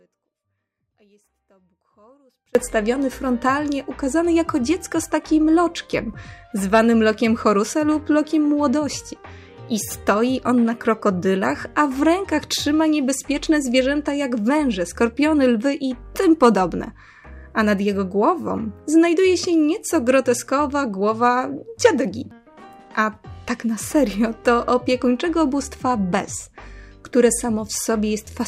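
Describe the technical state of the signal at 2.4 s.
Audio dropout to a faint residue, running from the very start of the clip to 2.55 s, so at 2.4 s the signal is still missing. The likely cause is a break in the wanted signal while the path after it stayed live, leaving only a faint leak of the sound some 35 dB below its normal level. The full signal returns abruptly at 2.55 s, a hard switch rather than a fade-in.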